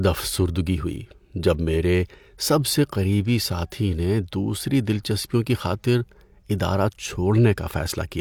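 Listening to this speech recording, nothing stood out as a technical problem.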